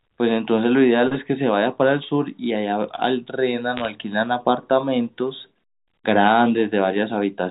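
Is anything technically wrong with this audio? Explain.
Yes. From 3.77 to 3.88 s there are bit errors on a digital phone line carried as G.711 A-law at 64 kbps: a small fraction of bits flipped, each corrupting one sample. Hits on sign or high-order bits produce sharp isolated ticks, heard as brief crackle over intact speech. Unlike packet loss, nothing drops out or repeats.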